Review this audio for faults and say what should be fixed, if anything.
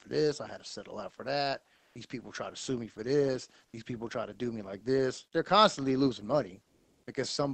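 Comfort noise in place of the background at 1.75–1.95 s, 3.65–3.73 s and 6.63–7.07 s: pauses become steady, featureless hiss, likely Opus DTX halting transmission while the receiver synthesises filler. Disabling DTX on the sending side keeps the real background flowing through pauses.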